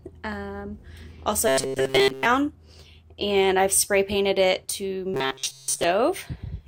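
A rigid, metallic buzz takes over the sound from 1.48 to 2.25 s and again from 5.14 to 5.84 s, pitched at 133 Hz and only loosely tracking the original. This robotic sound from repeated short buffers is likely caused by audio arriving too slowly, so a segment of about 7.5 ms is looped to fill the gaps. Most of each stretch is repeats, and the real audio underneath is skipped.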